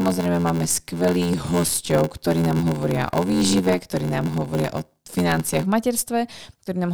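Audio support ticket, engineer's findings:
Block size mismatch (padded), 0.00–5.64 s: 86.1 Hz buzz, speech slowed to 0.861x at near-normal pitch. Upstream writes short blocks; reader zero-fills, which fits 512-sample reads. Waveform: regular zero gaps. Spectrogram: vertical dropout stripes, 86.1 Hz comb.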